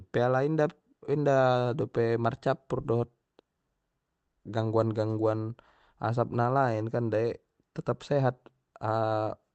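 No technical faults are audible.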